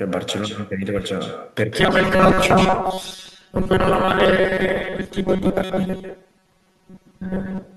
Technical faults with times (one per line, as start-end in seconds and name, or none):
0.00-7.77 echo with no canceller
1.80-7.77 robotic sound from repeated short buffers